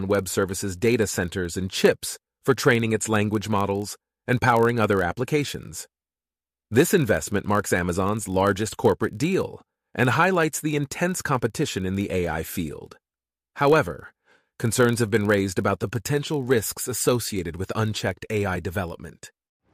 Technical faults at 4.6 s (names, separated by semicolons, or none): block size mismatch (padded)